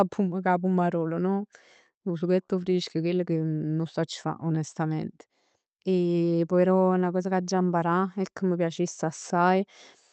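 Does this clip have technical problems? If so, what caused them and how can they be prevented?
Yes. There is clock drift between sender and receiver. The sender's clock runs roughly 1.5 percent slow, so the jitter buffer keeps draining. Locking both ends to a common clock, or using adaptive resampling, would prevent it.

Repeated timing corrections run from 0.20 to 9.39 s. The receiver repeats short pieces to keep up, slowing playback to 98 percent and adding around 150 ms. Smooth resampling instead of repeating pieces would prevent these hiccups.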